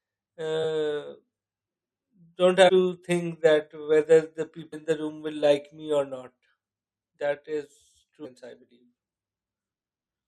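At 2.68–2.70 s, 4.72–4.74 s and 8.24–8.26 s, damaged data in a compressed stream makes the decoder misread frames and lose sync, producing brief disruptions in the speech. Each lasts roughly 20 ms.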